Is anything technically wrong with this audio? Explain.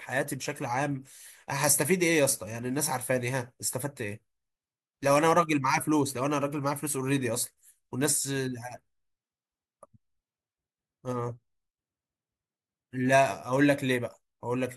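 No, nothing technically wrong can be heard in this speech recording. There is no technical fault anywhere in the clip.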